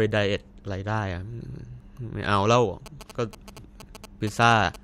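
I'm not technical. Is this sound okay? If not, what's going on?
No. From 2.86 s to 4.76 s, a galloping dit-dit-dit pattern of short buzzes sits under the speech, clearly quieter than the talking. These are GSM signalling bursts: a nearby 2G mobile phone briefly talks to the network in groups of radio pulses, and the recording circuit picks them up and turns them into sound. The buzz is a tone at about 217 Hz, the rate at which the phone pulses.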